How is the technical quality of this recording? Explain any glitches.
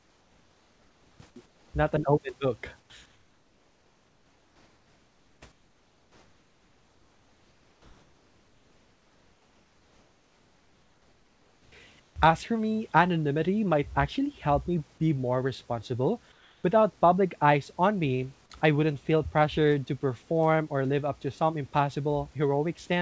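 The pauses in this speech recording are repeatedly filled with synthetic noise. The audio also has nothing above 8 kHz, which fits a wideband call codec such as G.722. The room noise sits about 38 dB below the speech.

Comfort noise in place of the background occurs at 0.0–1.2 s, 1.46–1.74 s, 2.80–2.90 s and 3.06–5.42 s (both after "an open book"), 5.52–11.72 s, 12.00–12.16 s, and 16.32–16.64 s (after "me be more responsible"). In each pause the real room tone gives way to a flat, featureless hiss about 3 to 6 dB quieter. This is likely the sender's discontinuous transmission muting non-speech while the receiver generates shaped noise.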